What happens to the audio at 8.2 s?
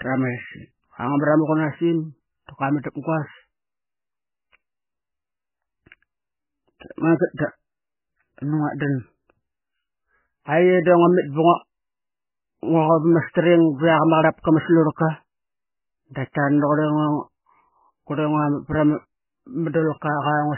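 At 8.2 s the speech has the watery, swirly MP3 compression damage heard throughout, with nothing above 3 kHz, likely from an encoder starved of bits at a very low bitrate.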